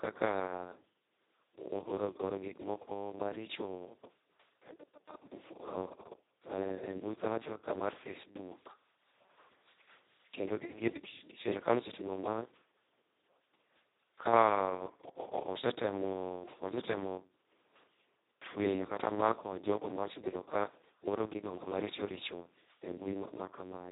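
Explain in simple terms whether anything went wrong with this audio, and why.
Something did go wrong, and it lasts from the first second to the last. The speech has passed through the Speex codec, an older speech compressor from internet calls and game chat, squeezed very hard. With so little data to rebuild each voice sound, it comes out hoarse, buzzy and robotic. Everything above about 3.8 kHz is missing too, so the speech sounds narrow and muffled, like an old phone line.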